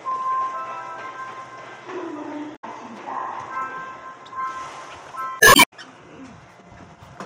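A recording of sounds with damaged data in the compressed stream at 2.52–2.64 s and 5.37–5.70 s: corrupted frames make the decoder misread and lose sync, giving chirps, clicks or short holes that show as abrupt waveform discontinuities and smeared vertical bands on a spectrogram.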